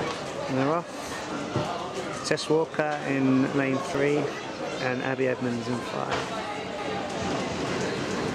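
At 3.95 s there is an overlap between stream segments. Two adjacent segments carried time stamps that overlapped, and the player trimmed the overlap even though that stretch of sound was not actually duplicated. A few milliseconds of audio are lost and the waveform jumps discontinuously, which is heard as a short click or tiny skip. The position, just before the 4 s mark, fits a stream delivered in 4-second segments.

From 6.78 s to the end of the clip, the audio is a doubled audio track. A second full-band copy of the same sound runs roughly 0.3 s behind the original, at about the same level. The cause is likely a second capture of the signal through a slower path being mixed back in. The copy has no decay or room colouring, so it reads as a dry, distinct repeat rather than reverb, and it begins abruptly at 6.78 s.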